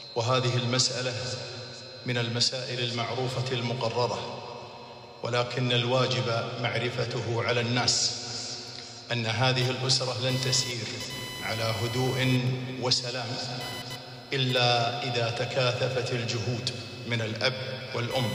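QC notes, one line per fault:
9.61–18.34 s, computer activity noise: a buzzing, chirping layer pulsing at around 1 kHz sits roughly 15 dB below the programme until the end. It tracks computer load rather than the audio, as processor or graphics activity disturbs the shared ground.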